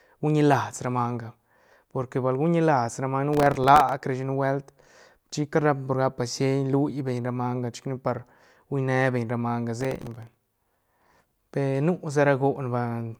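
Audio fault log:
3.33–3.92 s and 9.81–11.40 s, processor overload crackle: after "ra manga" and "beñ ra manga", missed buffers of a millisecond or two replay stale audio. This shows as dense broadband vertical streaks and jagged waveform steps.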